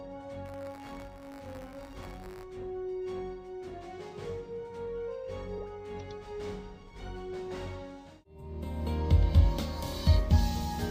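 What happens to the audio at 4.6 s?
Nothing goes wrong at 4.6 s; the audio runs through that moment intact, with no dropout, click, glitch or other disturbance.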